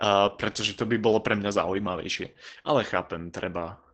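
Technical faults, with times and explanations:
Throughout, Opus voice compression: the speech is muffled and slightly hoarse and robotic, with nothing above 8.6 kHz. This fits SILK wideband coding at a low rate, around 12 kbps, with a coarsely coded excitation. That grainy, buzzy quality sets it apart from a plain low-pass filter.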